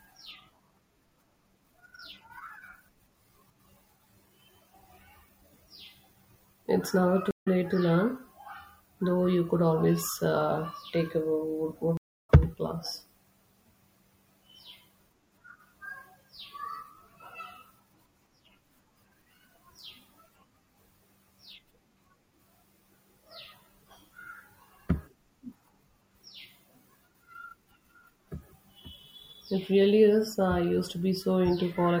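Speech with two stream reconnects, where the connection dropped and a fresh decoder restarted mid-stream. At 7.31 s, just before "to learn", there is 80 ms of silence, and the audio picks up roughly 50 ms later. At 11.97 s, after "uh take a wood", there is 241 ms of silence and a skip of roughly 200 ms.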